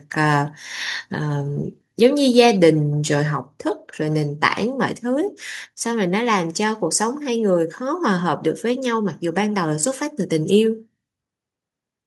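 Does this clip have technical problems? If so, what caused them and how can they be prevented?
Yes. The call software likely judged the microphone input too loud and cut the device's input volume in single steps, a microphone volume stepped down fault. At 2.34 s the whole sound, background included, drops abruptly by about 2 dB, and at 3.36 s it drops again by about 3 dB. Turning off automatic microphone level adjustment in the call software and setting a fixed, moderate input level prevents it.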